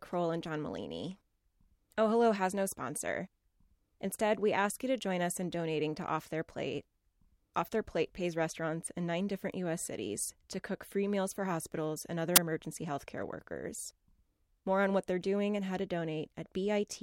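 At 12.36 s a brief crack of static cuts into the speech: file tags played as audio, where embedded cover-picture data is read as samples. Being compressed, it decodes to very loud white noise, seen as a dense block on the waveform and a sharp-edged broadband stripe across the spectrogram.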